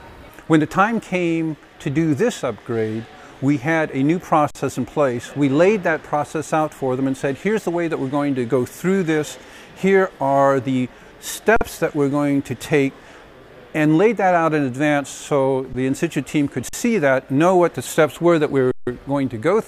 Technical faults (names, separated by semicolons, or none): underrun with held sample